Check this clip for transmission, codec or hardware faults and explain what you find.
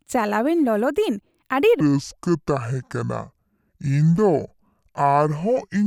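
One fault is present. From 1.8 s to the end, a section at the wrong speed plays at 0.616x, likely from a clock mismatch, dropping pitch about ten semitones into slow, deep speech.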